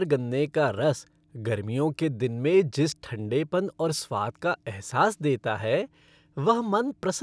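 No technical faults are audible anywhere in this speech recording.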